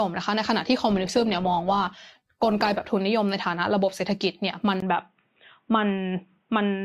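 Adaptive stream at a lower bitrate, from 0.88 to 2.88 s: the speech abruptly drops in quality for two seconds, with codec artefacts rising, then returns just as suddenly, with no gap at either change. This is what happens when an adaptive player switches to a cheaper encoding of the same stream as the connection slows. Here it sounds like a fall from about 64 kbit/s Opus to about 16 kbit/s for that stretch.

Input switched to a poorer device, at 4.80 s: a 20 ms silence breaks the audio, and from there to the end nothing above 3.8 kHz comes through, so the speech turns dull and band-limited. A new background noise floor appears, roughly 50 dB below the signal, while the overall level stays about the same. The likely cause is the recording system changing its input mid-take to a narrower-band device, such as another microphone or a headset's call mode.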